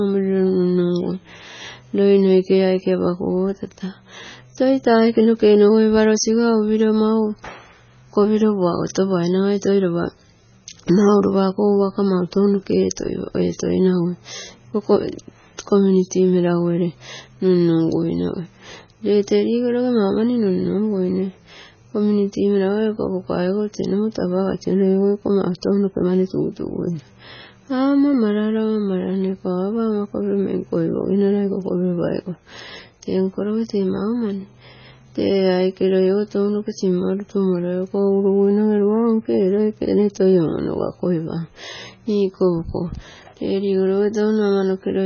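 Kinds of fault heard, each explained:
MP3 compression: The speech has nothing above 6.6 kHz and a watery, swirling texture, with sibilants turning metallic and consonant onsets smeared, likely from heavy MP3 encoding whose bit budget, around 16 kbps by the sound, forces a low treble cut-off and unstable high-band content.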